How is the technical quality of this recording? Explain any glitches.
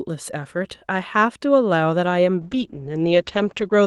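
The speech has one clear fault near the end, a call bitrate drop.

From 2.46 s to the end, the call's bandwidth estimate collapses and the encoder is forced onto far fewer bits, consistent with a fall from about 48 to 11 kbps. The audio bandwidth narrows from 12 kHz to 8 kHz and the speech turns muffled and rough, holding at its worst for the final 1.3 s.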